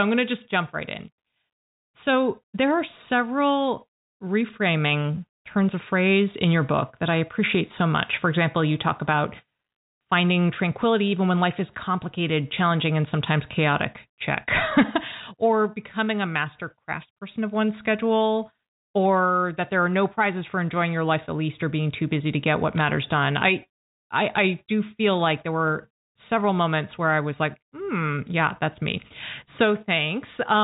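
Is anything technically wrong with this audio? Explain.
Yes. Between 22.78 and 22.81 s the speech carries a short burst of bit errors on a digital phone line. The line uses G.711 mu-law at 64 kbps, where each 8-bit code word stands for one sample on a logarithmic scale, so a flipped bit corrupts exactly one sample. A flip in the sign bit or a high-order bit throws that sample far from its true value, producing a sharp tick. Here the error rate is low, roughly one bit in five hundred, so the damage is a brief stretch of corrupted samples over otherwise undisturbed speech lasting only a few tens of milliseconds. The telephone band limit below 4 kHz is audible throughout as part of the G.711 channel.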